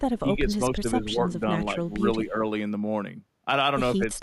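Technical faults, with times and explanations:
0.2–1.2 s, 1.98–2.42 s and 3.95–4.22 s, speech suppressed in double talk: the echo canceller likely mistook this side's talking for loudspeaker echo and turned it down, so the speech dips by roughly 10, 5 and 15 dB in parts of each stretch.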